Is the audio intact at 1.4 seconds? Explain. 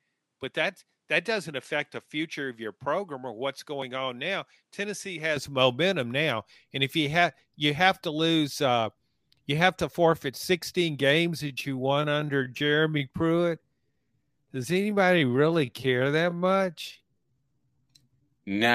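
No, 1.4 s falls inside an input switched to a poorer device, from 0.00 to 5.37 s, likely a change to a lesser microphone. The band is narrower, the level sits roughly 5 dB lower with faint added noise, and the fuller sound returns without a gap before "momentum now and if".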